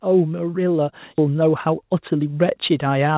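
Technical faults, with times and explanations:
1.02 s, microphone volume stepped up: the level jumps by about 4 dB in a single step, speech and background together. That's the call software deciding the mic was too quiet and bumping the device's input gain all at once, not ramping it.
1.18–1.20 s, skip ahead: playback jumps forward with no gap at all, and roughly 0.7 s of speech just isn't there. The two sides butt together directly. Later audio was already queued, so that chunk got dropped, on the way or by the jitter buffer overflowing, rather than concealed.
1.28–3.17 s, jitter buffer speed-up: from here to the end the speech runs at about 114% speed with the pitch unchanged, so it comes across as hurried. The receiver had more buffered than it wanted and kept trimming short pitch-period slices to claw back delay, around 0.3 s in total, all heard through the call path's narrow band that stops at 4 kHz.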